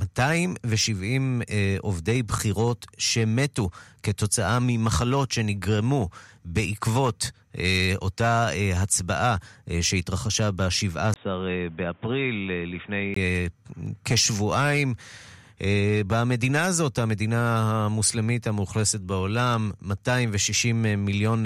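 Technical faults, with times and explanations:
11.14–13.16 s, input switched to a poorer device: after a 20 ms gap, the sound turns dull with nothing above 3.8 kHz, a few dB quieter, with faint added background noise, likely a narrower-band microphone taking over.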